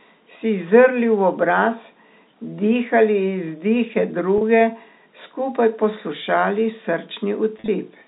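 At 4.38 s, packet loss with pitch repetition bridges a 30 ms gap, ending at 4.41 s. The receiver repeats the last pitch period to fill the hole. It sounds like a brief, slightly buzzy hold on the speech. From 7.58 s to 7.68 s, 70 ms is lost in scattered pieces over 100 ms. The longest run is 40 ms. The repeated cycle fades there. The telephone-band G.711 sound stays narrow throughout.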